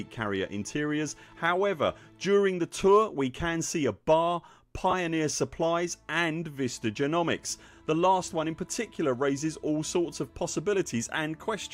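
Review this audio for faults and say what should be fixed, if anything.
Lost LE Audio frames at 4.91 to 4.94 s: about 20 ms of signal, which fits two dropped 10 ms frames, was concealed by replaying the last spectrum with scrambled phase. Unlike a plain dropout, there is no silent gap or click, just a brief noisy smear. The light lossy compression elsewhere is a separate, steady effect. To prevent it, keep the Bluetooth link stronger or allow more retransmission headroom so frames arrive intact.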